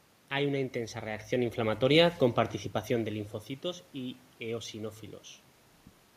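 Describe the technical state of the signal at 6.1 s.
At 6.1 s the signal is intact, with no fault present.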